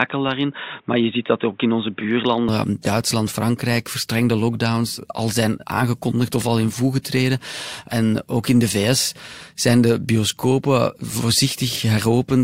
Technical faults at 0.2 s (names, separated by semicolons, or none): input switched to a poorer device